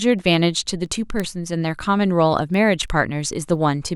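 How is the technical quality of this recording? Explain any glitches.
The recording has a clocking problem. From about 0.19 s to 3.89 s there are word clock ticks: sharp little clicks of uneven strength, roughly every third of a second, around ten in all. The receiving device is running on its own clock instead of locking to the sender's. They drift apart by something like 70 ppm, and each time they slip a single sample gets dropped or doubled, leaving a tick in the speech.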